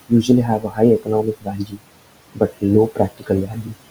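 Noise suppressor artifacts run through the whole clip: the steady room noise, about 18 dB under the speech, is pulled down by about 18 dB between phrases, unlike a plain gate's clean silence. Speech cut by the noise suppressor follows at 0.59–0.79 s, 1.0–1.8 s, 2.35–2.64 s, 2.95–3.3 s and 3.46–3.74 s. Quiet speech was mistaken for noise and dropped by up to about 18 dB, so the cut parts sound swallowed rather than clipped or missing outright.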